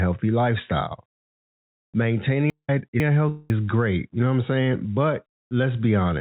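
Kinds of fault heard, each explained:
Chunks out of order: Between 2.5 and 3.5 s the sound jumps forward and then back, so that stretch comes out jumbled, with three abrupt seams. Two half-second blocks have traded places: the block due at 2.5 s plays one slot late, after the one that should follow it. Nothing is missing. The order is wrong, and each cut between mismatched blocks is a hard join.
Long network dropout: At 3.29 s the sound turns into a buzzy, hissy smear that fades over roughly 0.39 s, then a brief silence of about 110 ms follows before the audio picks up again with about 0.4 s gone. The likely cause is a stretch where no packets arrived, so the receiver stretched out the last sound it had and let it die away. The telephone-band dullness from the G.711 call codec, which keeps nothing above 4 kHz, carries through the smear.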